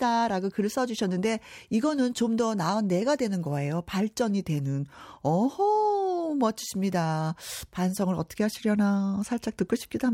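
No faults detected in this speech recording.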